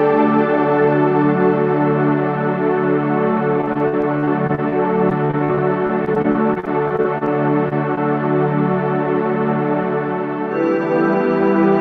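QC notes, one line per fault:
3.61–4.74 s and 5.10–7.29 s, repeated packet loss (robotic sound): in both stretches the audio keeps dropping out in short holes, none longer than about 47 ms, and the receiver patches each one by stretching the sound that came just before. About a fifth to a quarter of each stretch is this patched-in material, and the holes come so close together that the sound turns choppy and robotic, with pieces missing.
7.69–7.73 s and 7.95–7.99 s, short concealed packet loss: two brief holes of about 20 ms each, where the audio arrived too late to be decoded. Each gap is filled by continuing the preceding sound, as a pitched tone if it was voiced or as shaped noise if not, and then blended back into the real signal. The result is a quick smear or wobble at each point.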